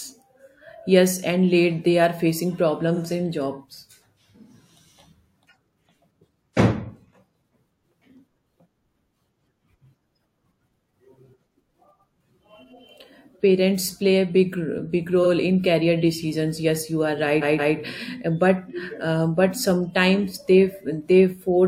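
Repeated frames occur at 2.94 to 2.99 s and 15.23 to 15.27 s, where a 42.7 ms slice of sound, which fits a single compressed frame, plays one extra time as a brief stutter. At 17.41 to 17.75 s a longer 170.7 ms block, which points to several frames, repeats twice more, a triple stutter that stretches the audio by 341.3 ms.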